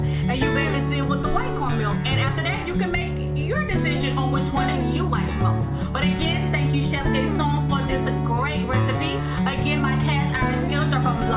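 No technical faults can be heard anywhere in this audio.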